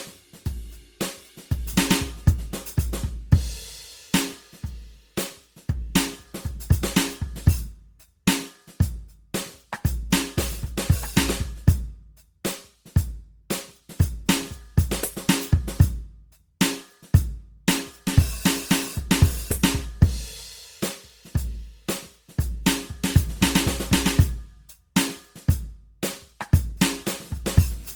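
A music clip with generation loss running through its whole length. The sound is swirly and smeared, with a hollow, phasey colour. Transients lose their edge and attacks blur. Content reaches up to about 20.2 kHz, so the damage is not a bandwidth cut. The likely cause is repeated lossy coding, around ten passes, fitting an Opus chain at 64 kbit/s. Each pass quantises on a shifted frame grid. Noise piles up.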